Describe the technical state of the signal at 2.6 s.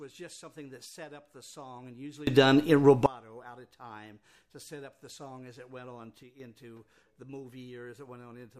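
At 2.6 s the audio sits inside a sudden gain jump from 2.27 to 3.06 s: sound and background noise rise together by about 24 dB, likely from gain applied without a ramp.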